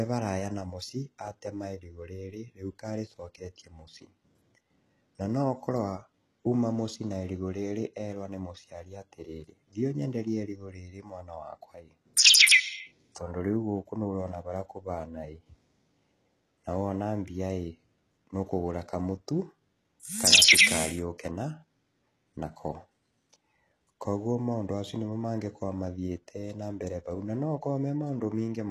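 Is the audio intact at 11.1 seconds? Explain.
No. At 11.1 seconds, as across the whole clip, the speech has plainly audible codec damage: s sounds come out gritty and metallic, and nothing reaches above about 12.4 kHz. This is likely HE-AAC compression at a very low rate, consistent with around 16 kbps. The codec keeps only the lower spectrum and fakes the treble by copying lower bands upward under a coarse envelope, so the upper harmonics no longer line up with the real ones.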